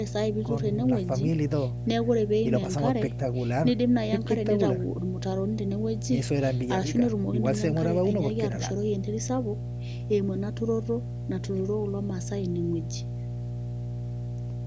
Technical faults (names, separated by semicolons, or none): mains hum